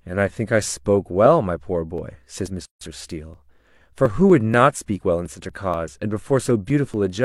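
From 1.98 s to 7.18 s, periodic USB or driver dropouts recur every 0.24 s, about twenty in all. Each time, something stalls the audio path, and around 10 ms of the speech is skipped outright rather than filled, so the signal jumps ahead. The result is a steady train of ticks, audible only where there is sound. On a waveform each skip shows as a small discontinuity. On a spectrogram it appears as a thin vertical broadband line, evenly spaced.

At 2.65 s a gap at a join of encoded pieces opens and lasts 158 ms, ending at 2.81 s. Two separately encoded segments were spliced without trimming the encoder's start-up delay and end padding, so that padding remains as silence in the middle of continuous speech. The sound drops out abruptly and resumes where it left off. The waveform shows a flat stretch with slightly blurred edges. The spectrogram shows a clean, empty vertical band.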